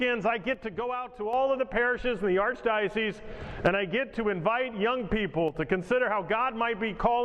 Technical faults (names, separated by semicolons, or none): one channel drops out